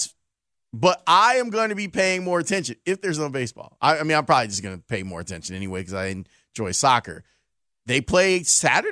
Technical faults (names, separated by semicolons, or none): none